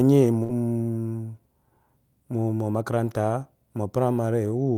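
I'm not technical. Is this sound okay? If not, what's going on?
No. Just under half a second in, from about 0.43 to 0.52 s, the speech briefly smears into a held, fading sound and then jumps ahead. This is a burst of packet loss: a small run of the audio went missing on its way over the network. The receiving end covered the hole by stretching the last bit of sound for about 53 ms while letting it die away, and when the speech returns, about 60 ms of it is simply gone.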